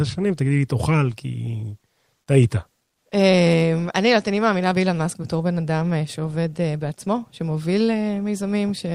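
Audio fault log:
Nothing stood out on listening to this speech recording.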